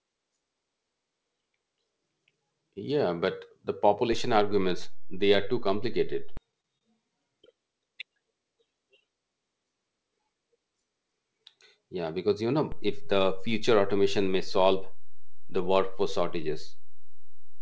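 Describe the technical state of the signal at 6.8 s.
At 6.78 to 6.83 s the speech has a short stall from a late packet. A packet arrived late, the jitter buffer ran dry, and the receiver stretched the last sound for about 28 ms before continuing from the same point. The result is a briefly held sound with a faint buzz or dip. Unlike a lost packet, no speech is skipped or replaced; everything after simply runs about 28 ms later.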